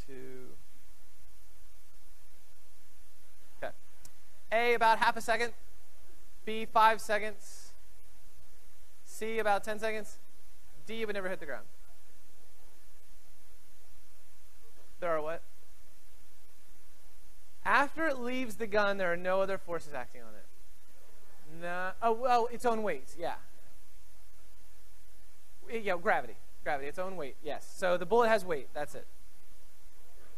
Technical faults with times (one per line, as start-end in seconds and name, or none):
3.69 compressed frames skipped